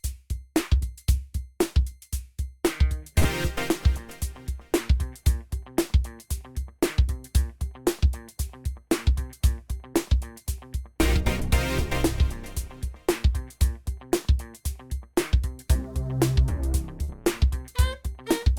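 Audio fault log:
3.19–3.27 s and 17.04–17.22 s, burst of packet loss: consecutive packets never arrived in time to play, so the receiver extended the last sound for about 50 ms while fading it, giving a brief held, decaying continuation of that sound. Playback then jumps ahead, skipping roughly 40 ms of audio each time.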